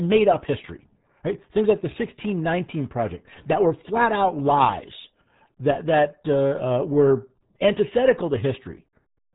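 From start to finish, the speech carries RealAudio 14.4 codec damage, and it is heavy. Nothing above about 3.9 kHz survives, so the top of the spectrum is simply gone. Consonants lose their edge and the voice sounds boxed in. The coder squeezes the signal into very few bits per frame, which fits an 8 kbit/s dial-up rate. What remains is muffled and gargly, with a watery roughness over every syllable.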